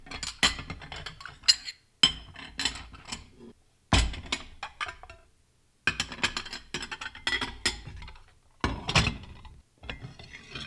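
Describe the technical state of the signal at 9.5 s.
At 9.5 s the signal is intact, with no audible fault at that point.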